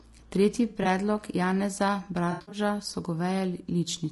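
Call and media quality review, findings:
Codec path, likely low-delay AAC compression (AAC-ELD) at a low bitrate, around 32 kbps. Short frames resolve pitch harmonics poorly. Speech is rough and grainy throughout, with noise between harmonics and a thin, synthetic-sounding top band. Damage plainly audible.

AAC frame loss with concealment at 0.69–0.87 s and 2.31–2.59 s. The decoder rebuilt missing frames from the last good spectrum. This gives smeared, noisy, phasey patches of about 80 ms and 160 ms of lost audio, in short runs under a tenth of a second.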